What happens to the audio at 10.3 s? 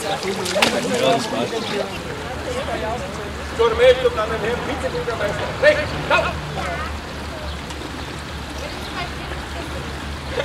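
Nothing goes wrong at 10.3 s; the audio plays through that moment intact, with no dropout, click or distortion to be heard.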